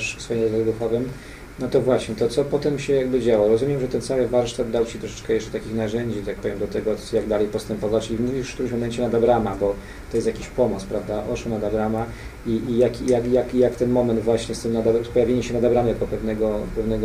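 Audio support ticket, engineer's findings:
Engineer's findings: no audio fault found in this ticket's clip.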